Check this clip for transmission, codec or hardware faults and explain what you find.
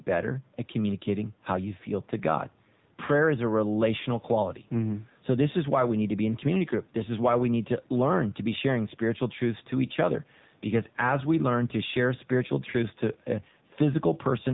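One codec fault runs through the whole clip.

AMR narrowband mobile codec, throughout: the speech has been squeezed into the 2G/3G mobile speech codec, which samples at 8 kHz and rebuilds the voice from a vocal tract model excited by a pitch predictor and a few pulses per 5 ms block. Nothing above about 3.8 kHz survives, so sibilants and air are gone. The coding damage is plainly audible as a buzzy, synthetic edge, which fits a low mode near 7.4 kbps. The call microphone processing's bass roll-off is normal.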